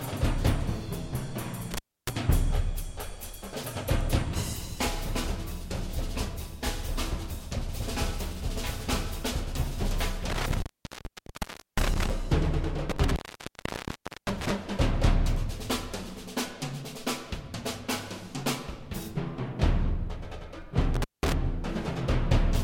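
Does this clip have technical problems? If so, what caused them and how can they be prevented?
Yes: intermittent contact at 1.74–2.10 s, 10.30–12.10 s, 12.90–14.52 s and 20.94–21.33 s. A loose plug or cable briefly loses connection, so the sound drops out for about 0.29, 1.16, 1.11 and 0.19 s, with crackle at the edges and faint hiss during each gap. Secure and inspect every cable and connector before recording, and replace any worn lead or jack.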